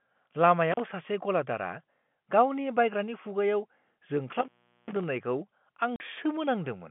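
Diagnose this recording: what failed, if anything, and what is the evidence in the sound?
Crackling dropouts at 0.72 to 0.80 s and 4.30 to 5.04 s, open for 35 ms then 400 ms, indicate intermittent contact: a loose plug or cable in the analogue wiring.

A hard-edged 40 ms silent hole at 5.96 s points to network packet loss filled with silence, which fits two 20 ms packets dropped and replaced with silence.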